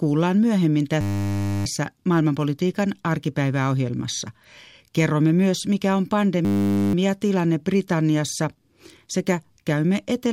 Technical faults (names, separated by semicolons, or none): system hang loop